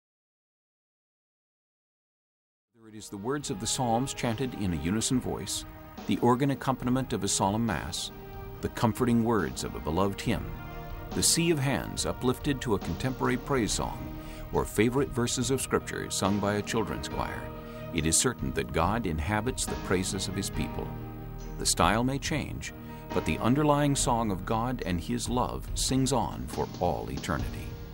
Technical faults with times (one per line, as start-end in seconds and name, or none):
none